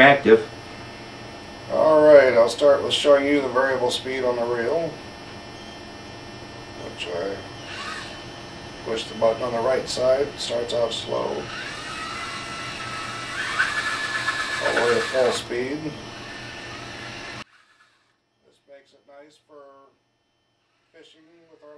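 From 17.42 s to the end, one channel is likely inverted: summed to mono, the shared content cancels, dropping the sound about 32 dB to a faint remnant.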